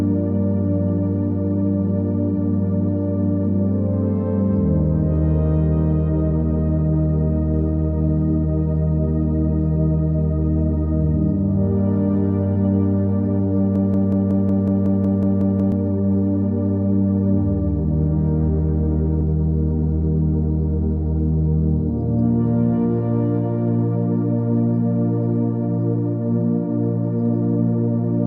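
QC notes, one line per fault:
13.76–15.72 s, broken-record loop: a fragment of about 184 ms repeats exactly, back to back, 11 times, so the sound stutters in a rigid mechanical rhythm for nearly two seconds instead of moving forward. This is likely a stalled player, encoder or stream that kept re-sending the last piece it held in its buffer. Whatever should have played during that stretch is missing, so the audio jumps ahead when the loop ends.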